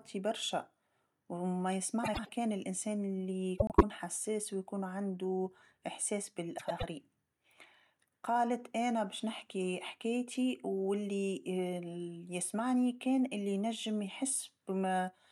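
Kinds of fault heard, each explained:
Frames out of order: Two neighbouring blocks of speech, each about 0.1 s long, are decoded in swapped order. This happens at 2.03 to 2.29 s, 3.58 to 3.83 s and 6.58 to 6.84 s. Each swap sounds like a garbled flutter. No time is lost.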